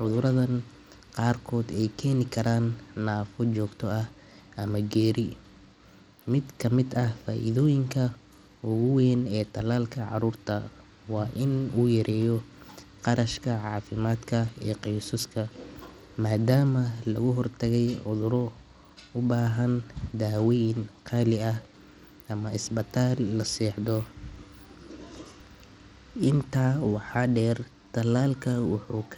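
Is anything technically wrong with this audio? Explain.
Yes. Throughout the speech, the audio has likely passed through Bluetooth SBC compression at a low setting, and the damage is plainly audible. SBC splits the signal into a few wide sub-bands and shares out bits without any model of hearing. At a starved allocation, consistent with roughly 96 kbps, the top bands get almost nothing. The treble thins and flickers in and out, and a gritty, grainy noise with aliasing clings to the speech.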